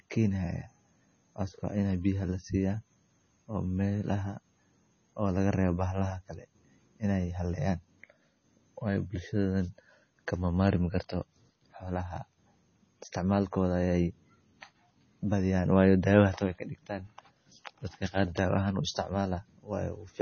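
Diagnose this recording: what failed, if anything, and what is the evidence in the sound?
The codec stage is where this went wrong, and it runs the whole length of the speech. Nothing gets through above 6.6 kHz, so the top is sliced off flat, and the heavy swirly, watery smearing that goes with it points to likely MP3 compression at a very low rate, something like 24 kbps. Starved of bits, the encoder drops the treble and lets weak frequency lines blink on and off between frames, which is what gives sibilants that metallic chirp and softens the attacks.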